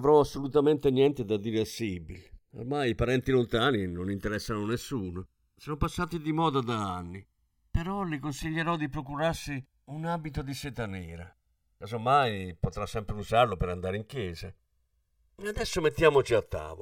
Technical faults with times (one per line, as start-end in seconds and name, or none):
0.00-16.82 channels drifting apart